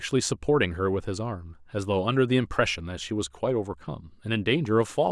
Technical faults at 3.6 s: none

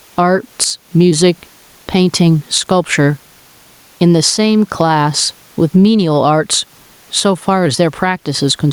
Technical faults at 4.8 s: gain pumping

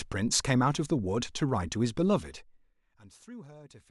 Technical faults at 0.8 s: none

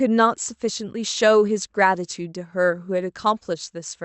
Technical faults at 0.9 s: none

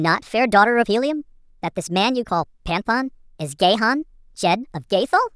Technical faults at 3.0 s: wrong sample rate

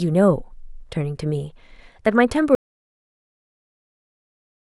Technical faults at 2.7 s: audio dropout to silence

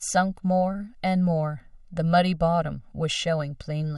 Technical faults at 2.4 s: channel delay (comb filtering)

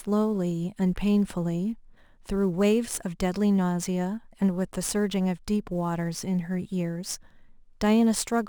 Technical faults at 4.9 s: sample clock jitter

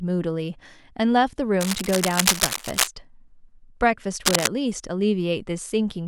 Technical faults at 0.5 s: none

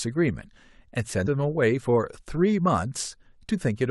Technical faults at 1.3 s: damaged data in a compressed stream

